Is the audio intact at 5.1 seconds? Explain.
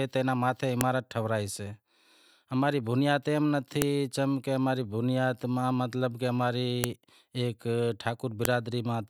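Yes, the speech at 5.1 seconds is intact, with no dropout, click, distortion or other fault heard at that moment.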